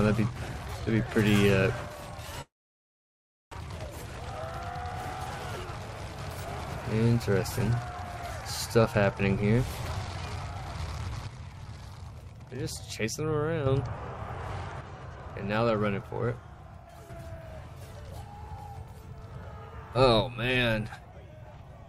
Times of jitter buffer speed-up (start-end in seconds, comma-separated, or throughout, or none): 4.10-4.42, 5.18-6.84